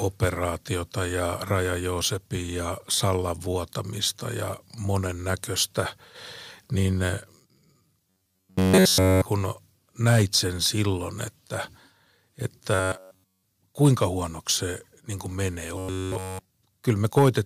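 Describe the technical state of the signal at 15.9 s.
At 15.9 s the speech has turned into robotic sound from repeated short buffers. The fault runs from 15.78 to 16.49 s. The voice becomes a rigid, metallic buzz fixed at 93.8 Hz, though it still loosely tracks the speech. Essentially all of that stretch is repeated material. The likely cause is late-arriving audio being covered by looping the last fragment, about 10.7 ms long, while the real audio is dropped.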